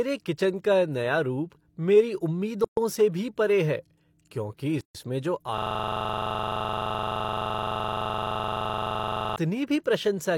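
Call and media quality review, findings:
Gap at a join of encoded pieces, 2.64–2.77 s (about 128 ms) after "रूप मेरी", and 4.81–4.95 s (about 140 ms) after "भी परे है क्योंकि". Encoder start delay and end-frame padding were left in at separately encoded segments. Unlike packet loss, the sound resumes exactly where it stopped, with nothing missing and smeared edges.

System hang loop, 5.58–9.36 s. A 42.67 ms slice repeats identically for nearly 4 s, repeating at about 23.4 Hz, which fits a 2048-sample ring buffer. The host or driver froze while the hardware kept cycling. Unlike jitter-buffer stutter, every repeat is identical and evenly spaced.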